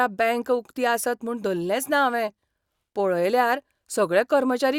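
No technical faults are audible anywhere in the speech.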